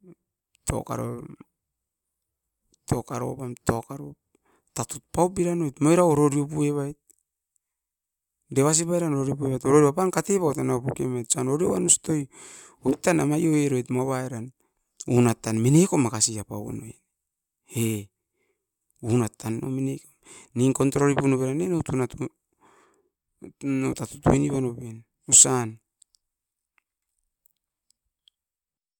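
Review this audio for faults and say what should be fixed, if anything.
Nothing stood out on listening to this speech recording, so there is nothing here that needs fixing.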